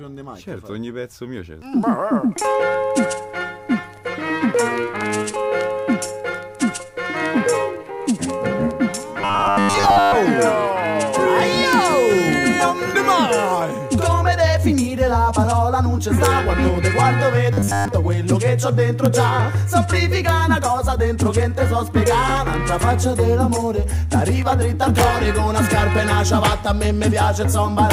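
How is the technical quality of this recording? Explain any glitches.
The recording has two kinds of glitch: a robotic buzz in two stretches, and a series of sharp cracks from 11.73 s onward.

Robotic sound from repeated short buffers, from 9.18 to 10.16 s and from 17.53 to 17.88 s: audio was likely arriving too seldom, so short pieces were looped and most of the real sound was skipped. The loops impose a rigid 100 Hz metallic buzz, which fits a 10 ms buffer.

Integer overflow at 11.73, 16.25, 19.06, 20.29, 22.08, 24.99 to 25.04, 26.46 and 27.91 s: on loud peaks the sample values exceeded the integer limit and wrapped to the opposite sign instead of being held there. Each wrap flips the waveform across its full range, giving violent cracks far harsher than clipping.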